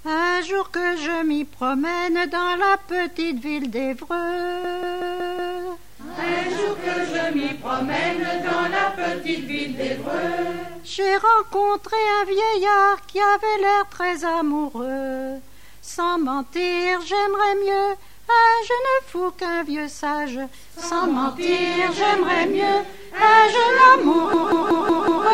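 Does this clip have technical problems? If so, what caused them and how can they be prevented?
Yes, there's a system hang loop at 4.64 to 5.57 s and again at 24.33 to 25.26 s. Something froze while the audio hardware kept replaying its ring buffer: a 186 ms chunk repeats five times at about 5.4 Hz, a machine-gun stutter that fits an 8192-sample buffer. Keeping the audio thread at real-time priority and fixing the driver or system stall should prevent it.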